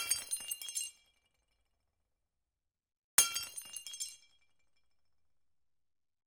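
No technical faults can be heard anywhere in this recording of sounds.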